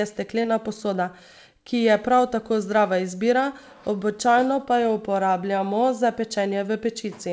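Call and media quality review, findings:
Brief smear at 0.42–0.46 s, a short wobble where the sound stalls and blends back. Short concealed packet loss in the jitter buffer/decoder path: about 20 ms arrived too late, and the receiver extended the preceding sound to cover it. Band-limited to 8 kHz, consistent with G.722.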